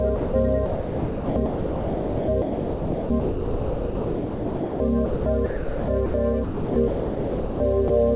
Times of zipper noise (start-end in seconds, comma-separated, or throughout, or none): none